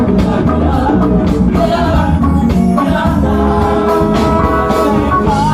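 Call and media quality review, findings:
Skip ahead at 1.93–1.95 s. Jitter buffer overflowed, or packets were lost in transit, and about a second of queued audio was discarded. Playback jumps forward with no fill and no silence. The audio on either side is spliced almost directly, so the material in between is missing.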